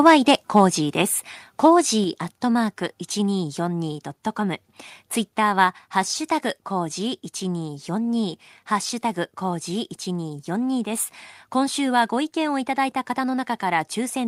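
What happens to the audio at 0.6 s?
A brief harsh, crackling edge cuts through the speech from 0.57 to 0.60 s, where the loudest peak gets its top flattened. This is microphone overload, likely from input gain set too high, pushing the peak about 1 dB past the converter's limit.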